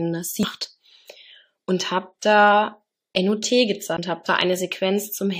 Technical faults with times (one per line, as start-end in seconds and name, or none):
0.43 damaged data in a compressed stream
3.97 CD skip